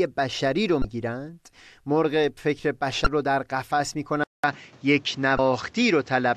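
At 0.81 to 0.85 s and again at 3.03 to 3.07 s, the speech is broken by a brief glitch from damaged data in the compressed stream. Each burst lasts about 34 ms. Corrupted bytes leave the decoder unable to read those frames correctly, so it emits garbage for a moment, loses its place, and resynchronises at the next valid frame header. The result is an abrupt glitch in the audio.

At 4.24 s the sound drops out for 200 ms and then returns duller and narrower, with nothing above 7.9 kHz, through to the end of the clip. A new noise floor sits roughly 30 dB under the speech, and the overall level stays about the same. This is most likely the input switching to a poorer device, such as a second microphone or a headset in call mode, whose narrower band and own background noise replace the original pickup.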